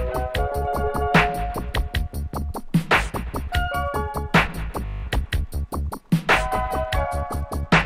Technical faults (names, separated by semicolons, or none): system hang loop; Bluetooth SBC bit pool drop